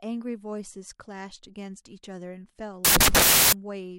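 Samples built from the wrong bytes, from 2.85 to 3.53 s: for roughly two thirds of a second the reader assembles each sample incorrectly, either offset by a byte, in swapped order, or with the wrong alignment. The rapidly fluctuating low bits end up as the most significant part of every value, so the speech is replaced by a burst of loud, harsh broadband noise, close to white on the louder sounds.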